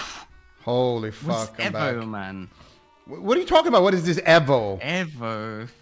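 Nothing stood out on listening; the audio carries the top end stopping near 8 kHz that fits a wideband call codec, and no fault can be heard in it.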